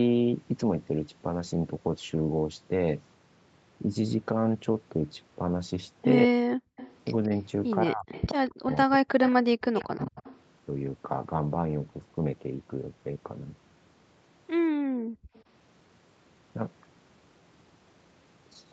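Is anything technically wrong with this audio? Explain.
Yes. The speech drops out in places, the room sound is gated, and a delayed echo leaks through.

Speech suppressed in double talk, at 6.26 to 6.39 s and 7.86 to 10.25 s. The speech dips by roughly 40 dB. This is likely an echo canceller turning down both sides when both talk at once.

Background gated by the echo canceller, at 6.67 to 6.77 s and 14.72 to 15.34 s. The room sound drops by about 40 dB while the far end plays, then returns.

Echo leak, at 6.77 to 7.4 s, 8.14 to 10.39 s, and 15.34 to 15.42 s. A copy of the speech follows 177 ms behind. It is roughly 15 to 20 dB below the speech, and fainter in the last instance. This is likely loudspeaker sound the canceller failed to remove.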